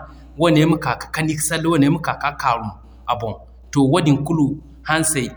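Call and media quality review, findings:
Mains hum throughout: ground loop or nearby transformer coupling the 60 Hz supply into the signal path. Steady low tone under the speech, about 25 dB down.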